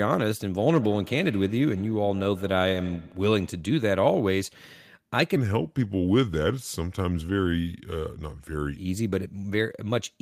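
From 0.54 to 3.71 s there is feedback echo between two devices: a second device replays this microphone's signal, which is picked up again, so each sound returns about every 150 ms, thinner and ringing, at about -19 dB. A spectrogram shows evenly spaced, fading copies trailing each onset.

From 5.36 to 8.77 s the speech plays at the wrong speed, 0.827 times normal, likely from playback against a mismatched clock. Everything drags and drops roughly three semitones. On a spectrogram the harmonics shift downward and compress together, while waveform syllables stretch longer.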